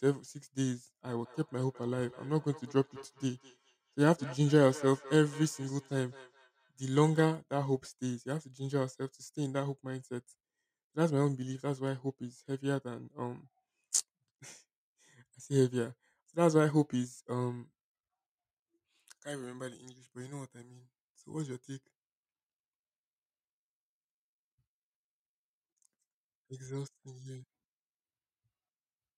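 From 1.23 to 7.35 s, the speech repeats roughly every fifth of a second, at most about 19 dB down: feedback echo between two devices replaying each other's microphone.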